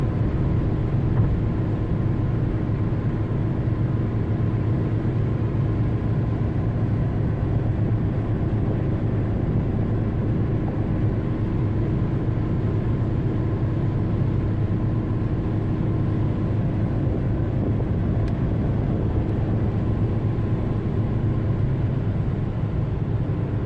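No technical faults are audible.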